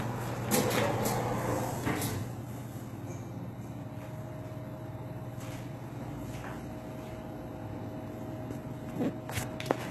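HE-AAC compression runs through the whole clip and is the likely cause of plainly audible damage. Nothing remains above 12.3 kHz, and the treble beneath is rebuilt from copied lower bands, so it sounds gritty and metallic. This fits a starved bitrate near 16 kbps.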